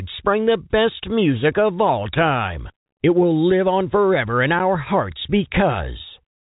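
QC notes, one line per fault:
Nothing stood out on listening to this speech, which comes through G.711 telephone coding with its usual narrow band topping out near 3.8 kHz.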